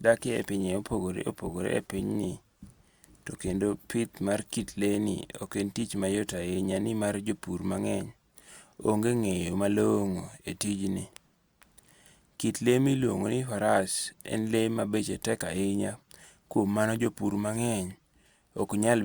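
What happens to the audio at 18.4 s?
Nothing goes wrong at 18.4 s; the speech carries on intact through that moment, with no dropout, click or distortion.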